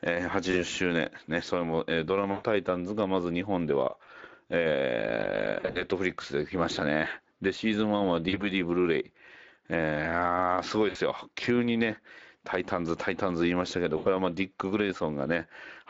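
Speex codec coding runs through the whole speech clip, and its damage is plainly audible: a hoarse, grainy CELP texture from too few bits for the excitation, consistent with a bitrate around 20 kbps.

VoIP packet loss concealed by the speech codec occurs at 0.51–0.63, 2.31–2.45, 4.05–4.10, 5.59–5.84, 8.29–8.43, 10.89–10.97 and 13.97–14.08 s. The decoder extends the last pitch and filter, so each gap smears into a buzzy tone or coloured noise that fades. The sound stays weak briefly after recovery. The gaps suggest losses of one to six 20 ms frames, with 5.59 s scattered in short runs.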